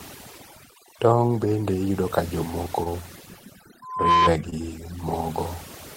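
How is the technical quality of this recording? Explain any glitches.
The technical quality is poor, with three separate problems in this speech recording.

Overdone noise removal affects the whole clip. The noise reducer was set too aggressively, so it pulls individual frequency bands far down wherever they sit close to its noise estimate, and it takes the quieter parts of the voice with them. The pauses drop to near silence with twinkling specks. Dropouts or packet loss come and go in short events, but this processing is constant.

Short concealed packet loss occurs at 2.83 to 2.88 s and again at 4.50 to 4.54 s. Each time, about 20 ms of the stream failed to arrive, and the decoder filled roughly 22 ms by extending the preceding sound before blending back into the real signal. The result is a brief smear or wobble. A hard dropout would leave a click or a gap of silence, but here the gap is papered over with a continuation of the sound before it.

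Loudspeaker feedback squeal runs from 3.82 to 4.30 s. A microphone picked up the loudspeaker it was feeding, and at 1 kHz the loop gain went above one, so that tone fed on itself. It swells over roughly a third of a second until it is roughly 10 dB louder than the speech, then stops. Because it grows from nothing at a single steady pitch, it is distinct from a fixed test tone or electrical hum.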